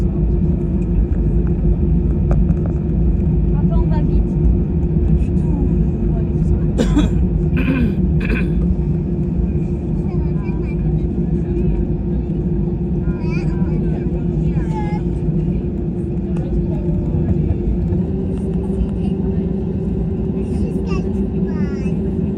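From 17.98 s to the end, the audio shows a wrong sample rate fault: it suddenly runs about 1.09 times faster and sits roughly 1.5 semitones higher. That ratio fits 44.1 kHz material being played out at 48 kHz with no conversion. Speed and pitch rise together by the same factor, which separates it from a pitch shift or time-stretch, where one would change without the other.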